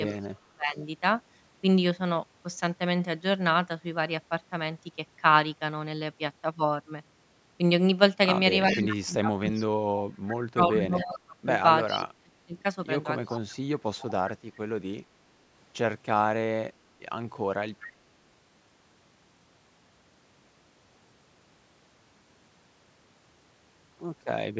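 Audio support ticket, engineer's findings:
Echo leak: far-end loudspeaker pickup likely not fully cancelled by the echo canceller and returned to the line. Delayed repeat of the talker, about 0.39 s behind, at 0.07–0.26, 8.7–9.64, 11.18–11.99, 13.26–14.32 and 17.8–17.88 s. Level about 35 dB down at first, then about 20 dB down, and about 10 dB down at 11.18–11.99 s.

Speech suppressed in double talk: echo canceller likely could not separate the near talker from loudspeaker echo while both sides spoke, so it attenuated both. Near-end speech dips and drops out in pieces, 0.13–0.79 s (roughly half a second affected, around 30 dB deep) and 8.72–13.86 s (roughly 3 s affected, around 35 dB deep). The call processing's top end stops at 8 kHz.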